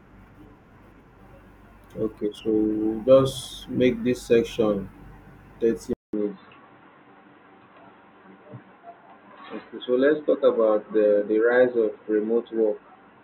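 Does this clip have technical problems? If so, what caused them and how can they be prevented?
Yes. After a 200 ms gap at 5.93 s, the speech turns dull to the end, with nothing above 4 kHz and a faint new hiss, likely an input switched to a poorer device. Lock the recording input in settings and stop headsets from switching to their call profile.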